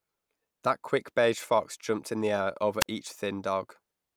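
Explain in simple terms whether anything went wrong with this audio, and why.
At 2.80 to 2.86 s the speech briefly drops out: a wireless microphone squelch dropout. The radio link from the microphone weakened, so the receiver muted itself for about 35 ms, leaving a short gap of near silence before the signal returned.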